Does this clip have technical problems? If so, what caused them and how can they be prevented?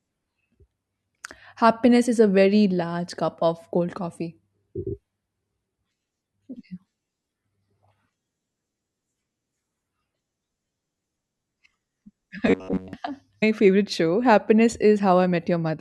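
Yes. From 12.47 to 12.93 s there is robotic sound from repeated short buffers. The likely cause is new audio reaching the playback software too seldom, so it covered the gaps by looping the last fragment of roughly 11 ms while real audio went unplayed, with most of that stretch made of repeats. That loop imposes a fixed buzz near 94 Hz, turning the speech metallic and rigid while its outline still roughly tracks. A larger jitter buffer with proper concealment would prevent it.

At 13.42 s a stream segment was skipped. The likely cause is one segment of the segmented stream failing to load, with the player moving straight on to the next instead of waiting or retrying. At least a second of the programme drops out, so the speech lurches forward abruptly with a small blip at the join. Retrying failed segment requests and keeping more segments buffered ahead would prevent it.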